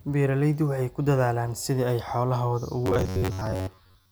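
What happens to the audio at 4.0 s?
At 4.0 s the speech is inside a stretch of robotic sound from repeated short buffers, running from 2.86 s, just after "dadaalaan sidii ay xoolahooda", to the end of the clip. It is likely caused by audio arriving too seldom, so a segment of roughly 10.7 ms is looped over most of the span, imposing a rigid metallic buzz at 93.8 Hz. A spectrogram shows evenly spaced harmonic stripes at multiples of that frequency, and the waveform shows near-identical cycles repeating.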